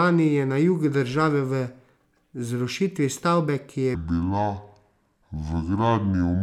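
A section at the wrong speed runs from 3.95 s to the end of the clip at 6.42 s. Here the speech suddenly plays at about 0.68 times its proper rate, so it drags and drops about seven semitones, turning deep and sluggish. Because speed and pitch fall together at one instant, the likely cause is that this stretch was played or rendered against the wrong clock rate.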